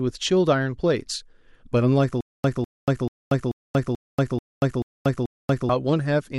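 From 2.21 s to 5.69 s the speech falls into a stutter with silent gaps. A 200 ms fragment repeats eight times, each followed by about 235 ms of dead silence. It returns every 436 ms. This likely comes from a stalled stream, and the speech that should have played there is lost.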